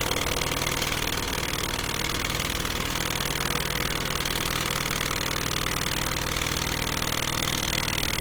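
Across the whole clip, tonal parts of the sound turn grainy, rough and noisy, a plainly audible degradation that stays fullband with content reaching about 20.2 kHz. This is likely Opus compression in its music (CELT) mode, with band energy kept but detail filled by folding or noise, which fits a rate around 16 kbps.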